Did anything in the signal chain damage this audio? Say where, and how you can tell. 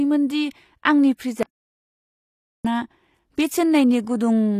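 Yes. At the codec stage, the speech shows the likely marks of HE-AAC compression throughout: plainly audible treble rebuilt by band replication from copied lower bands, with gritty, lispy s sounds. On a spectrogram the upper bands look smeared and blocky, and nothing appears above 14.9 kHz.

At the input or link stage, an audio dropout to silence runs from 1.43 to 2.65 s, losing about 1.2 s. The sound cuts off abruptly and returns mid-flow, likely from lost input written as silence. The waveform shows a flat line with no room tone, and the spectrogram shows a fully blank column.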